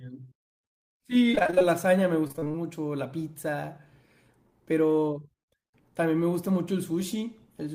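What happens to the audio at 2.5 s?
At 2.5 s the audio is inside a burst of repeated packet loss (robotic sound) running from about 2.27 to 2.56 s. Short stretches of the stream go missing in quick succession, the longest around 25 ms, and each hole is patched by extending the preceding sound. About half of this span is concealed material rather than real signal, so the speech turns choppy with pieces missing.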